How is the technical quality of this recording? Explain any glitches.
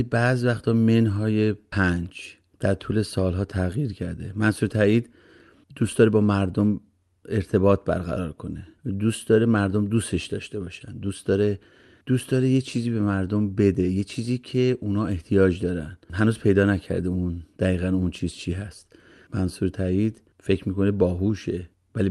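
Nothing here really counts as a glitch: the speech comes across steady and intact, carrying only the ordinary character of an Opus call at around 32 kbps, with the top end topping out near 12 kHz as you'd expect from that kind of connection.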